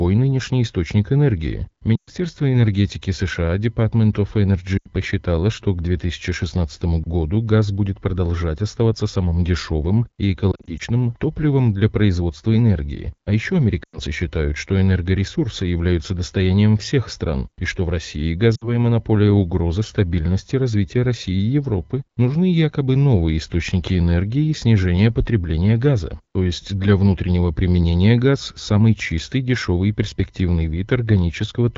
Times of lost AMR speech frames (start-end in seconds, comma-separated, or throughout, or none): 1.96-2.10, 4.78-4.89, 10.52-10.83, 13.84-13.98, 18.55-18.70